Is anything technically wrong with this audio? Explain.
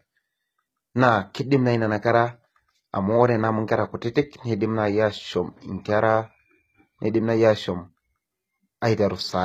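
Yes. Throughout the speech there is plainly audible damage that sounds like HE-AAC compression, likely at a very low bitrate, around 20 kbps. Only the lower spectrum seems properly coded. The treble is rebuilt by copying lower bands upward under a coarse envelope, so its harmonics don't line up with those below. Sibilants come out gritty, metallic or lispy. On a spectrogram the upper band looks like a smeared, repeated copy of the lower one, with a visible seam where they meet.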